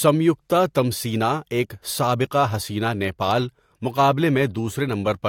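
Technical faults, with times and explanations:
No technical faults can be heard in this speech clip. There is nothing to mark at any time.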